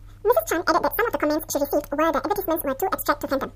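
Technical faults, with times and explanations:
Throughout, audio read two samples at a time (double speed): the speech plays at 2x speed and a full 12 semitones higher. Each pair of samples was taken as one frame, as if the data held two channels or wider samples.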